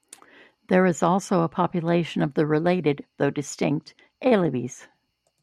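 A recording of speech in which nothing stood out as a technical problem on listening.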